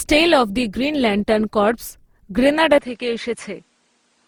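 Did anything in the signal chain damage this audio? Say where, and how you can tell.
Yes. Throughout the speech there is generation loss at the codec stage. The texture is swirly, smeared and hollow, with blurred attacks, beyond what Opus at 64 kbit/s alone would give. It likely comes from roughly ten decode–encode passes stacking quantisation noise. On a spectrogram, smeared streaks appear below about 20.2 kHz.

At 2.78 s the input switched to a poorer device, likely another microphone or a headset profile, with no gap. From there the sound turns dull, content stops at 10.5 kHz, the level falls about 5 dB, and a new noise floor appears about 40 dB down.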